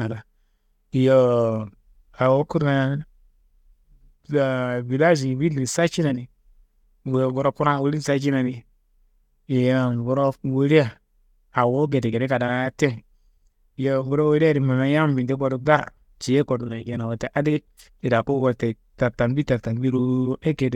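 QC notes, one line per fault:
No faults found in this speech clip. Nothing in it calls for a timed entry.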